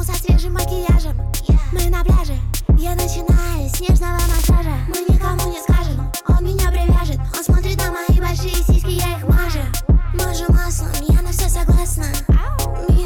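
No technical faults can be heard anywhere in the recording.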